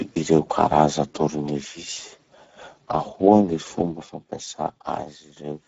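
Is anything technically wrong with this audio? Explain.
Yes. The speech carries Speex codec damage from start to finish, plainly audible throughout. Speex is a CELP coder that models the voice with a filter driven by a coded excitation; at a low setting, which here fits a rate near 10 kbps, that excitation is starved of bits, so the speech sounds hoarse and noisy. On a spectrogram, harmonics look smeared and grainy, the upper band is a diffuse noise-like wash, and nothing appears above about 7.7 kHz.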